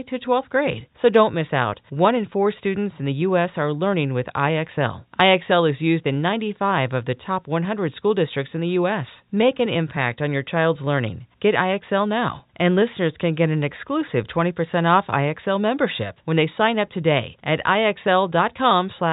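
No technical faults can be heard anywhere in the recording.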